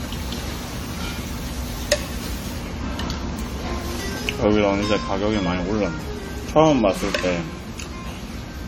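Generation loss runs through the whole clip: the sound is swirly, smeared and hollow, with blurred attacks and nothing above 19 kHz. The likely cause is repeated lossy re-encoding, around seven passes through a chain that fits AAC-LC at 64 kbit/s. Each decode and re-encode quantised the audio again on a shifted frame grid, so the noise and spectral gaps of every pass were stacked on the previous ones.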